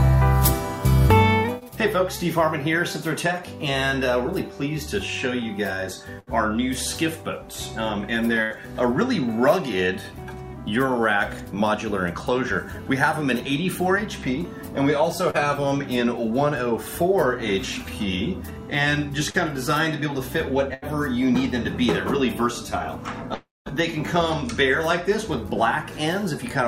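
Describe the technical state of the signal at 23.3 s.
At 23.34 s the signal breaks off and does not recover until 23.69 s. This is a long network dropout, likely caused by packets that never reached the receiver. The receiver keeps extending the last sound it had, so a fading buzz fills the gap. That concealment lasts about a third of a second. About 200 ms of the gap is silence. When audio returns, about 320 ms is missing.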